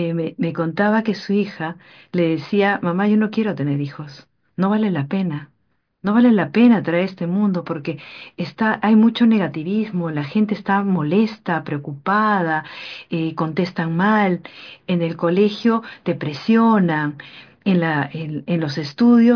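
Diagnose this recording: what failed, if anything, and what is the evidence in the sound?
Nothing in the chain seems to have gone wrong here, as the speech comes across steady and intact with no audible trouble at any stage.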